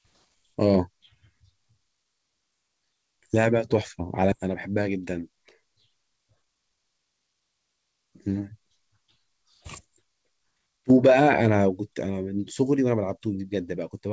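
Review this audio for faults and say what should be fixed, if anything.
Skip ahead at 4.32–4.34 s: the jitter buffer discarded about 0.4 s of queued speech and spliced directly onward, leaving an abrupt waveform join and a vertical spectrogram seam. Size the jitter buffer to absorb delay swings, and use time-stretching rather than dropping audio to drain it.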